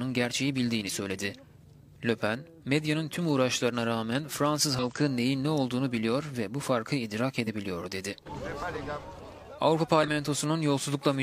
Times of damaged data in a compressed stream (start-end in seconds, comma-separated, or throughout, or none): 0.84-0.90, 4.79-4.84, 7.43-7.48, 10.03-10.08